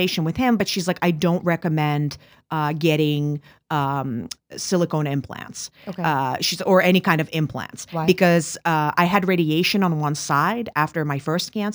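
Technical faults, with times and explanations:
throughout: crude rate conversion, a gritty inharmonic fizz trailing loud, bright speech; samples were repeated without filtering, which fits a 32 kHz to 48 kHz change.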